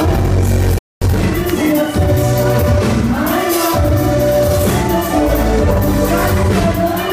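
A playback stall at 0.78 s silences the sound for about 230 ms, likely because the player ran short of data or its thread was blocked. Time-compressed catch-up follows from 1.02 s to 2.56 s: small pieces are cut and cross-faded at 1.15 times speed, hurried at normal pitch.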